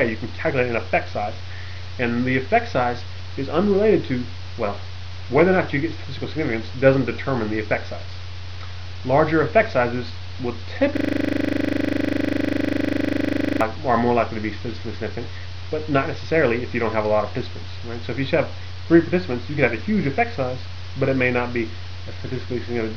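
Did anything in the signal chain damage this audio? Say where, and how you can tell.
Yes, at the driver or buffer stage. From 10.97 s to 13.61 s there's a system hang loop: the same 40 ms slice of sound repeats exactly, some 66 times, giving a hard 25 Hz machine-gun stutter instead of moving audio. That's the host or driver freezing while the sound hardware keeps replaying its ring buffer. The 40 ms period fits a buffer of about that length.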